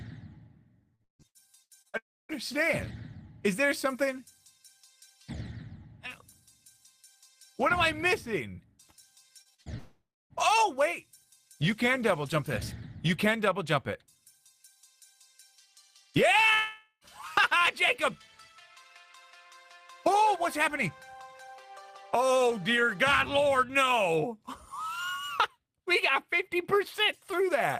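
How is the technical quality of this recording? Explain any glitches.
The recording has network glitches: two stretches of repeated packet loss and three likely dropouts.

From 0.95 to 2.36 s, repeated packet loss (robotic sound) sets in. Seven gaps, the longest 155 ms, are patched by extending prior sound. About 30% sounds choppy and synthetic.

From 9.42 to 9.69 s, the same fault returns. Three gaps up to 40 ms are filled, making 40% of that span robotic.

From 1.98 to 2.32 s, sound stretches into a fading tail, then about 270 ms of silence. This is likely a long network dropout.

From 9.78 to 10.33 s, about 520 ms is missing. The filler fades into about 250 ms of silence, and the audio resumes with that part gone.

From 16.54 to 17.04 s, about 480 ms is lost. The concealment fades, with about 60 ms of silence before the audio returns.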